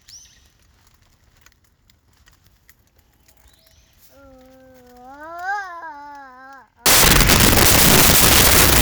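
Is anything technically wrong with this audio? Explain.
Yes. From 6.86 s to the end at 8.82 s, the everyday sound is replaced by loud, harsh broadband noise that swamps the material. This is a case of samples built from the wrong bytes: the reader assembled each sample from misaligned or swapped bytes, so the rapidly changing low-order bits ended up as the most significant part of every value. The result is large, essentially random sample values, which is why the section sounds like noise.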